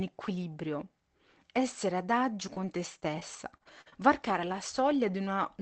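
From 2.41 to 4.54 s, repeated packet loss chops the speech. Seven holes, up to 46 ms, get filled by repeating prior sound.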